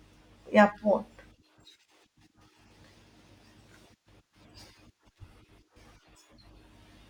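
Throughout the speech there is imaging from linear upsampling. The top of the band is dulled, and a faint mirrored copy, roughly 45 dB down, sits between 12 and 24 kHz, which fits straight-line interpolation from 24 kHz to 48 kHz. Sibilants shimmer metallically. Unlike aliasing, the spurious content mirrors upward above the band rather than folding down into it.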